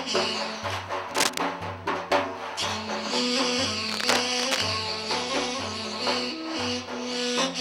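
Two bursts of cable scratch noise break into the audio, from 1.11 to 1.38 s and again, for longer, from 3.89 to 4.63 s. Each is a dense, uneven crackle and rustle sitting at roughly the same level as the wanted sound. The likely cause is a worn cable, connector or control being moved, its contact resistance fluctuating rapidly and injecting irregular noise into the signal path.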